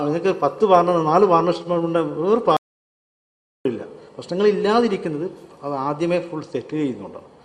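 The audio cuts out abruptly at 2.57 s and stays completely silent, with no room tone underneath, until it returns mid-flow at 3.65 s, leaving a gap of about 1.09 s in which whatever was playing is simply missing. This is an audio dropout to silence, and the likely cause is that the input signal was lost for that stretch, through a disconnected device, a failed link or a stray mute, while recording carried on writing silence.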